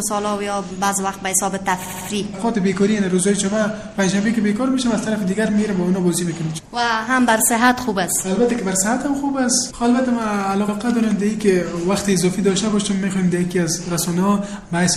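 A watery, swirly quality runs through the whole recording, with the treble dulled, metallic chirps on bright sounds, and sharp attacks smeared. This is likely MP3 compression at a low bitrate, in line with about 64 kbps. Short of bits, the encoder cuts the top end at a fixed frequency and drops quiet frequency lines that flicker in and out from frame to frame, and the damage is plainly audible here. The audio also stutters twice. From 1.84 to 2.08 s a 78.4 ms fragment plays three extra times, adding 235 ms. At 10.67 to 10.75 s the same length of fragment plays once more, adding 78.4 ms. These are repeated frames, where a run of compressed frames is decoded again. The 78.4 ms block fits three MP3 frames.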